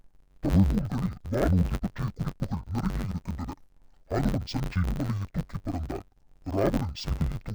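Dull, robotic speech runs the whole length, with a steady buzz near 94 Hz and no clear octave drop. The cause is interleaved audio read as planar: each 10.67 ms block, which fits a 512-sample buffer, is split into halves rather than alternating left and right samples.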